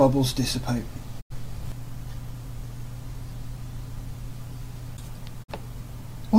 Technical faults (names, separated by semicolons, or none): digital broadcast dropout